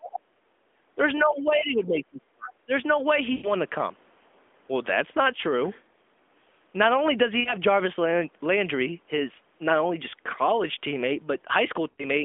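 Speech over a narrowband mobile call, band-limited to roughly 250 Hz to 3.5 kHz. An echo canceller that likely could not untangle simultaneous talk caused speech suppressed in double talk, with the talker ducked by around 30 dB from 0.00 to 0.37 s and by around 25 dB across 1.24 to 2.72 s, about a second of it affected. Inside that stretch, from 1.38 to 1.49 s, residual loudspeaker pickup likely let the other side's voice leak through, a faint scrap about 20 dB below the talker. Radio errors caused lost AMR speech frames, which the decoder concealed with fading repeats, smearing and fading the sound over 120 ms at 3.32–3.52 s, 60 ms at 7.40–7.54 s and 80 ms at 11.90–12.05 s.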